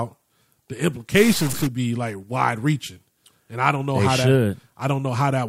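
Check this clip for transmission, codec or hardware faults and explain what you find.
One fault stands out, a stuck bit lasting half a second from 1.17 to 1.67 s, ending just before "be like wide reaching". The speech turns harsh and buzzy, with a noisy hiss filling the gaps. The likely cause is one data bit held fixed, which pushes about half the samples off by a step of roughly -25 dBFS. On a spectrogram, broadband hash smears upward; the waveform shows small jagged offsets.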